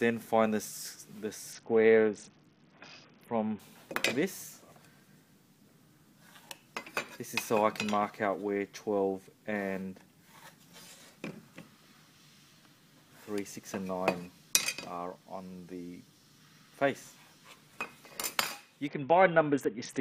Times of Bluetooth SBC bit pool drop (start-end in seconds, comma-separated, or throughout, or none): 1.53-3.59, 18.87-20.00